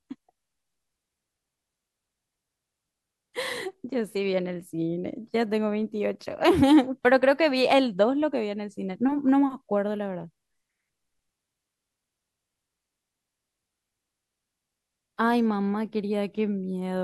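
No technical faults occur at any point in the recording.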